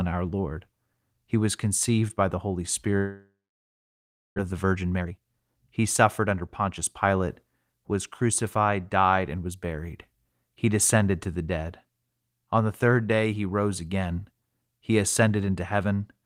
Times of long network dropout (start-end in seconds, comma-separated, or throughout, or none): 2.97-4.40